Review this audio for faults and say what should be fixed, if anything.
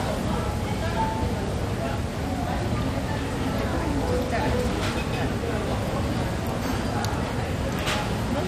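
Throughout the audio there is plainly audible MP2 compression damage, likely from encoding at a low bitrate around 64 kbps. Nothing is present above 14.9 kHz, and the remaining upper content has a gurgling, granular texture. This happens because each of the sub-bands gets too few bits, so they are coarsely quantised and flicker in and out. A plain low-pass filter would sound dull but clean, without that granularity. Re-encode from the original source at a higher bitrate or in a lossless format.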